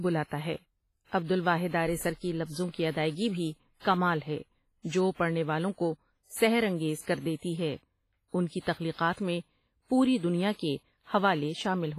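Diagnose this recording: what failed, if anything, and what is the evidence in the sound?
WMA compression runs throughout, at the codec stage. The speech sounds ringing and washy, with hiss that breathes with the signal and nothing above 15.4 kHz. The heavy damage fits a low bitrate around 24 kbps, likely a WMA encoder zeroing weak spectral lines.

Pre-echo occurs from 9.13 to 9.17 s, just before "میں پوری". A 42 ms hiss precedes the attack, which sounds smeared. The transform codec spread quantisation noise sized for the loud onset across its whole block, filling the quiet moment ahead of it.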